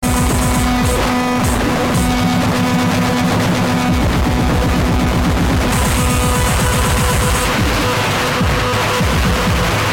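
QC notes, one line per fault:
Nothing stood out on listening to this music.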